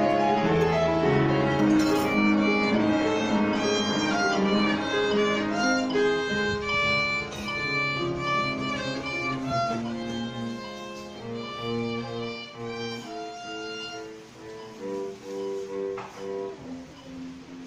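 No technical faults can be heard anywhere in the recording; the signal stays steady and intact throughout.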